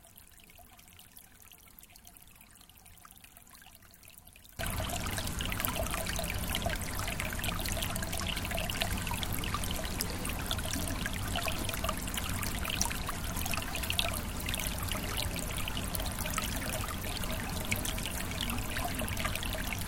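A recording of sounds opens with a problem: from 0.0 to 4.59 s the audio, heard in mono, is faint and sits about 21 dB below what follows, with the content shared by both channels largely gone. The likely cause is one channel inverted, so the shared material cancels when left and right are summed. A waveform shows a shrunken envelope over that stretch, and a spectrogram shows all bands weakened until 4.59 s.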